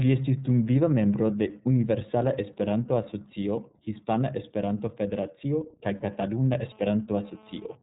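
The whole clip of speech has gone through the iLBC codec, and the damage is plainly audible. Everything above 4 kHz is missing, so it sounds narrow and telephone-like, and the speech has that slightly rough, synthetic edge you get when each frame's excitation is coded on its own. The texture fits 30 ms frames at the lower iLBC rate of roughly 13 kbps, the mode that goes with that frame length.

From about 5.83 s to 7.75 s there's GSM phone buzz, a hard, raspy tone at about 217 Hz with a stack of harmonics sitting on top. It's a nearby 2G handset whose transmit bursts are being picked up and rectified by the audio circuitry, so the buzz has nothing to do with the speech itself. It sits about 28 dB below the signal and comes and goes rather than holding steady, which points to the phone doing a data transfer rather than a call.

Right inside that stretch, from 5.97 s to 6.03 s, there's a 60 ms dropout from lost iLBC frames, which fits two 30 ms packets going missing. 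The decoder covers the hole by repeating the last pitch cycle mixed with some noise, so you hear a brief held, slightly buzzy vowel instead of a gap. Because iLBC frames don't depend on each other, the speech snaps straight back once the packets return.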